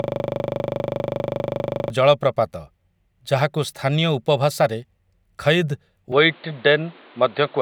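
The clip opens inside a system hang loop that is already under way and lasts until 1.9 s. The driver or host has stalled while the audio hardware keeps replaying the same stretch of its ring buffer. The repeating segment is 40 ms long, which fits a 40 ms buffer, and it cycles at 25 Hz, about 47 times in all. With a loop that short, the speech collapses into a steady, rough buzz at 25 Hz.

From 6.12 s to the end, the sound turns dull and band-limited. Nothing is present above 4.6 kHz, and a faint new noise floor appears well beneath the speech. The change is abrupt, with no silence at the transition and no clear shift in loudness. This points to an input switched to a poorer device, likely a different microphone or a headset call profile with a narrower passband and its own background noise.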